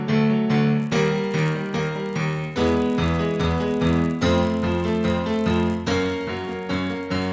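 Resampler restarted on every block from 0.8 s to the end at 7.33 s: each 10 ms block is converted separately, leaving edge errors heard as a 100 Hz buzz under the sound.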